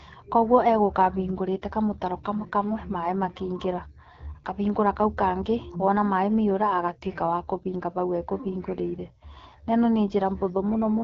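Throughout, the speech sounds rough and raspy, with plainly audible coding damage and nothing above about 7.6 kHz. This is the AMR wideband (HD Voice) codec at one of its lowest rates, which fits 8.85 kbit/s. Its vocal-tract model has too few bits to render detail cleanly.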